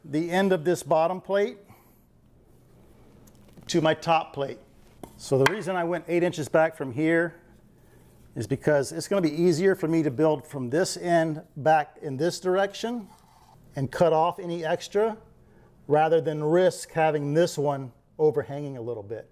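No technical faults can be heard anywhere in the recording.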